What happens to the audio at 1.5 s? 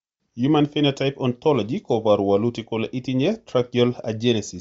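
At 1.5 s the speech carries the same damage heard through the whole clip: nothing above about 7.8 kHz, with a breathy, grainy edge on the upper sounds. The likely cause is Bluetooth LC3 compression at a low rate. The codec discards much of the upper band in each 10 ms frame and fills the gaps with noise. On a spectrogram this shows as a hard ceiling near 7.8 kHz, with speckled, smeared texture beneath it instead of crisp harmonics.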